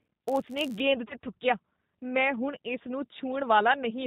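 A speech recording carries G.729 codec damage throughout, and the damage is plainly audible. Nothing above 4 kHz survives. The voice is rebuilt from a vocal tract filter, a pitch predictor and a few pulses per frame, so it sounds rough and slightly synthetic. That character fits the 8 kbit/s G.729A variant. From 0 to 0.80 s there is a block size mismatch (padded). One stage hands over shorter blocks than the next stage reads. The shortfall in each block is filled with zeros. Those repeated tiny gaps produce a buzz at 91.5 Hz, the block rate. The inserted silence also stretches this stretch of audio. It plays at 0.996 of normal speed, very slightly slow, at about its normal pitch. From 1.08 to 1.15 s, just before "ਥੁੱਕੀਆ ਮੈਂ ਹੁਣ", there is VoIP packet loss concealed by the speech codec. About 20 ms of audio went missing, which fits a single lost packet. The decoder filled the hole by extending its last pitch and filter settings at falling gain. 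This gives a brief fading smear. Each frame builds on the previous one, so the voice stays weak and distorted after the gap until the decoder recovers.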